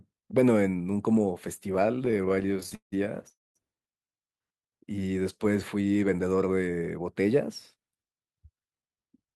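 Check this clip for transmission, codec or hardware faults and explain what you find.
The clip has three network-related faults, all in how late packets were handled.

Repeated stalls (stutter) run from 2.05 to 2.94 s. Packets arrived late or too slowly, so the jitter buffer emptied 22 times. The receiver stretched the last sound each time, filling 384 ms in total, the longest gap 170 ms. The speech drags and stutters. Nothing is lost.

A call audio freeze follows at 3.30 to 3.57 s. The sound holds and fades, with 200 ms of that near silence, adding 252 ms of fill. The likely cause is delayed packets emptying the buffer. The speech then resumes where it stopped.

A jitter buffer speed-up runs from 6.99 to 9.13 s. The buffer had built up too much delay. To shrink it, the receiver cut short pitch-period pieces repeatedly, removing about a fifth of a second. Speech plays at 109% speed, same pitch, sounding hurried.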